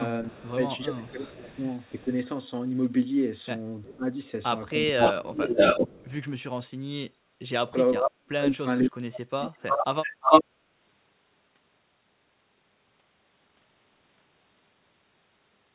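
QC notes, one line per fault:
0.27–0.51, 1.05–2.04, 4.99–6.13, 9.43–10.44 s, echo leak: a delayed copy of the speech comes back, faint at first (369 ms late, about 35 dB down), then loud (510 and 350 ms late, about 5 dB above the speech), likely a speakerphone echo canceller letting its pickup through.
0.3–2.1, 3.82–4.07, 4.92–4.98, 7.55–9.89 s, speech suppressed in double talk: the talker dips or drops out in bits while the other side talks, by around 20 dB and up to around 40 dB in the last stretch, likely the canceller ducking everything it couldn't separate.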